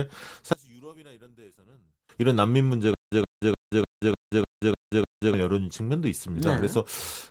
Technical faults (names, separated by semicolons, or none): one channel inverted; stutter with silent gaps